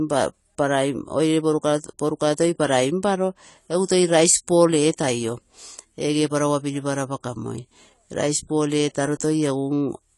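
Throughout the speech, the audio has likely been squeezed through AAC compression, which fits AAC-LC at around 32 kbps. Short of bits, the encoder discards everything above 11.4 kHz and quantises the rest coarsely, leaving the speech dull, smeared and plainly fizzy on sibilants.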